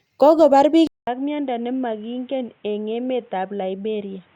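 At 0.87 s the speech drops out for about 200 ms, then returns dull and boxy, roughly 10 dB quieter, with nothing above 3.8 kHz and a new background noise sitting around 35 dB below the speech. It stays that way to the end of the clip. The sudden change in tone, level and noise likely comes from an input switched to a poorer device, with the recording moving to a narrower-band microphone or a headset's call profile mid-take.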